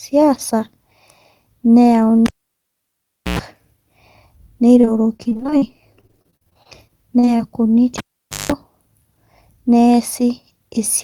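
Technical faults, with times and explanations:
2.26–3.39 s, cable pulled and plugged in: a pop as the live cable comes out, about 1.08 s of near silence, then roughly 0.1 s of 60 Hz mains buzz while only the plug tip touches, and a second pop as the signal reconnects.
4.81–7.41 s, repeated packet loss (robotic sound): a dense run of short dropouts, the longest 45 ms, each patched by extending the preceding sound. Roughly a fifth of this stretch is filled-in material, so the speech turns choppy, with fragments missing.
7.98–8.52 s, cable pulled and plugged in: another pop on disconnection, about 0.49 s of near silence, then roughly 0.19 s of 50 Hz mains hum as the tip makes partial contact, ending in a pop when the full connection returns.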